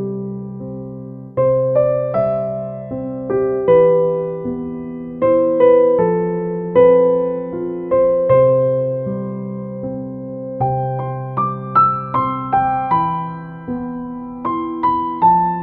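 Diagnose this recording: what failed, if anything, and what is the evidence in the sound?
Nothing here points to a failure anywhere along the chain, so there's nothing to diagnose.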